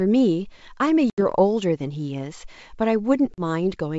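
At 1.10 s the speech drops into a hard-edged hole of about 80 ms, a few packets' worth, from packet loss on an ADPCM call, here the G.722 wideband stream. Once the audio resumes, the decoder's predictor and step size no longer match the sender's, so it comes back with some grit before settling by 1.21 s. A shorter gap, about 40 ms and a couple of packets, hits at 3.34 s and recovers the same way by 3.41 s.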